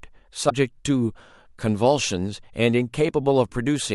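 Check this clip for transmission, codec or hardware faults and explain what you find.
One fault stands out, early in the speech, lasting about 30 ms.

From 0.49 to 0.52 s the speech jumps abruptly ahead, and that instant comes out corrupted rather than clean. The likely cause is a broken MP3 bit reservoir. MP3 frames may store part of their data in space left over in earlier frames. Once frames are dropped, the next frame reaches back for its borrowed bytes and decodes another frame's data instead. The span fits roughly one 26.1 ms MP3 frame.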